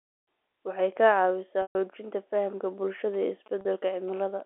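Packet loss with pitch repetition hits this G.711 telephone speech, band-limited to 300–3700 Hz, at 1.62–1.75 s and 3.61–3.65 s. The receiver repeats the last pitch period to fill the gaps. The 130 ms gap fades to silence before the speech cross-fades back, and the 40 ms gap sounds like a brief held, buzzy tone. GSM signalling bursts run from 3.14 to 4.41 s as a galloping pattern of short 217 Hz buzzes, roughly 25 dB below the speech, where the audio circuit rectifies a nearby 2G phone's radio bursts.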